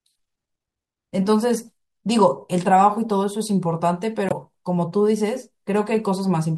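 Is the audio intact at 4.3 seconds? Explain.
No. Between 4.29 and 4.33 s a Bluetooth stall, likely interference holding up packets, let the headphone buffer run dry, dropping the speech into 20 ms of silence before it resumes.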